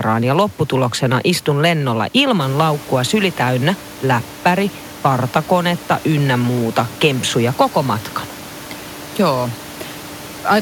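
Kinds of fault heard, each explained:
No faults can be heard in this speech clip. The room's background noise rises by about 10 dB roughly two and a half seconds in and then sits about 20 dB below the speech.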